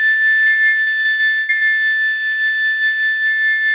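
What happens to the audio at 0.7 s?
That's inside a run of repeated packet loss (robotic sound), from 0.44 to 1.63 s. Ten dropouts, the longest about 102 ms, get patched by stretching the previous sound, so roughly a third of that music turns choppy.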